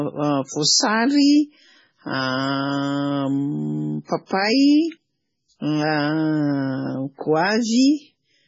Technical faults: MP3 compression; pre-echo

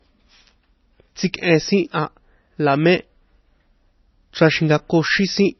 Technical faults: MP3 compression; pre-echo

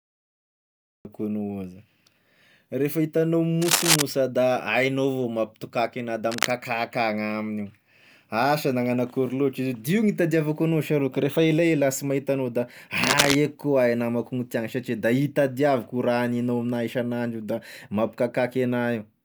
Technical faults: cut-off start; cable scratch noise

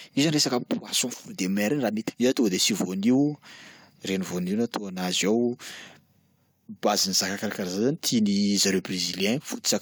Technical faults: damaged data in a compressed stream

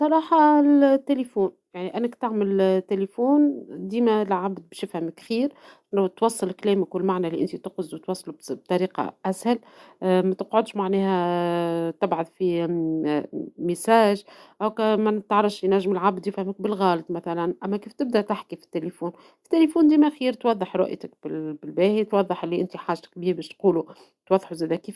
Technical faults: none

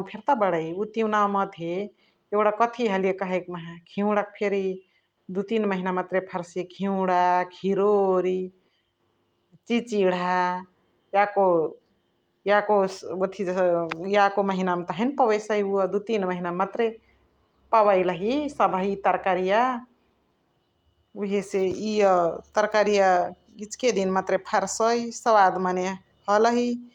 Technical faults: none

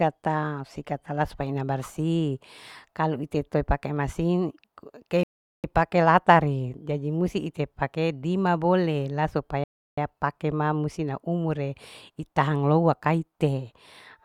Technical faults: rebuffering stall

